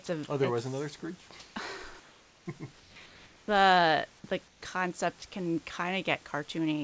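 Right at 0.06 s there's a tiny 20 ms bite out of the speech where the sound drops to flat noise. That's most likely sound dropped by the voice detector, which mistook a quiet bit for background and briefly stopped sending. The same thing happens at 5.2 s, with about 10 ms of actual speech lost.

In between, the pauses at 1.40–1.56 s, 2.80–2.96 s and 4.48–4.62 s go smooth and featureless. That's likely comfort noise in place of the background: the real room noise, sitting about 30 dB under the speech, gets swapped for synthetic hiss. The hiss is about 1 dB louder the first time and about 4 dB quieter the other two, so the floor level shifts.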